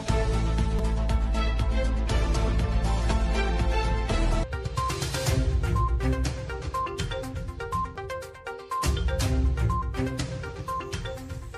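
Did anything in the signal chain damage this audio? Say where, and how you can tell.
Yes, at the driver or buffer stage: a repeated buffer at 0.79 s and 7.96 s. When data ran late, the device replayed a 5 ms block, twice more then once, heard as tiny clicks. The waveform shows identical 5 ms segments with hard joins, and the spectrogram shows thin vertical lines.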